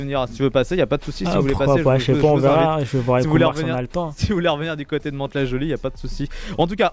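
No technical faults can be heard anywhere in this audio.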